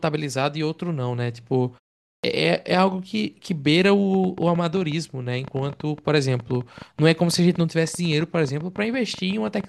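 At 2.18 s, after a 0.47 s pause, the speech resumes with a clipped start after a pause: the output device, idle in silence, needs about 56 ms to wake, so the opening sounds vanish. Unlike muted pauses, where only background drops, speech itself goes missing.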